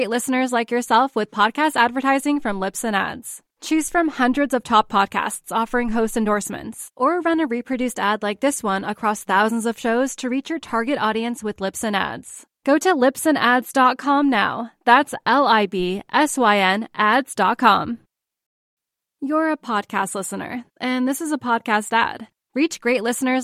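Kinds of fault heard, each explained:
No technical faults can be heard in this recording.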